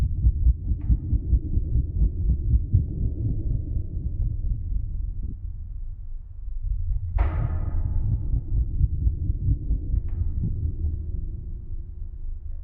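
Lost LE Audio frames at 3.43 s (23 ms), 5.23–5.33 s (scattered, longest gap around 30 ms) and 10.44–10.49 s (45 ms): the decoder repeats the last spectrum with random phase, so each gap is a short noisy smear, seen as blurred, unstructured energy on the spectrogram.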